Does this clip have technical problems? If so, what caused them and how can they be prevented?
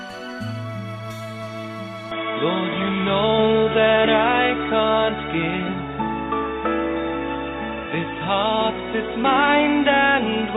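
Yes. From 2.11 s to the end, the sound turns dull and boxy, with nothing above 3.8 kHz. The level shifts by roughly 5 dB, with faint new background noise and no gap. The likely cause is an input switched to a poorer device, one that passes a narrower band. To prevent it, lock the recording input to one microphone before starting.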